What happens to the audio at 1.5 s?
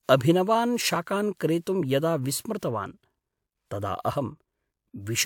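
Nothing goes wrong at 1.5 s: the speech continues intact through that moment, with no dropout, click or distortion.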